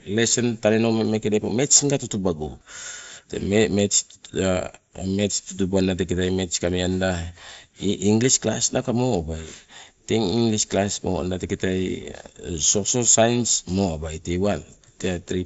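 Nothing here stands out as a fault, just speech coming over a Bluetooth headset link on the mSBC codec, with the top end topping out around 7.7 kHz the way that wideband headset path does.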